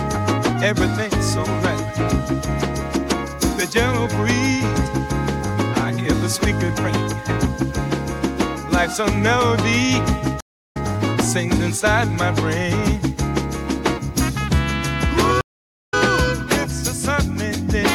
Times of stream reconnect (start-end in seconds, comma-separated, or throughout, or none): 10.40-10.77, 15.41-15.94